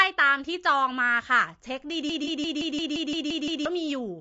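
Low-delay AAC compression runs throughout: the speech sounds rough and grainy, with noise between harmonics, likely from AAC-ELD's short frames at a bitrate around 32 kbps.

A broken-record loop runs from 2.10 to 3.66 s: a 0.17 s fragment repeats nine times back to back, likely a stalled stream resending its last buffer.

AAC frame loss with concealment follows at 2.24 to 2.29 s: a 30 ms smeared, noisy patch, consistent with one lost frame filled from the previous spectrum.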